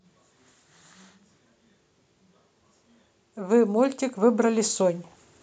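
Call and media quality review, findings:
Automatic gain rising, 3.34–5.08 s. Speech and background noise floor swell together by about 8 dB over roughly 1.7 s. Probable component: AGC on capture path, judging input too quiet and ramping gain up gradually rather than stepping.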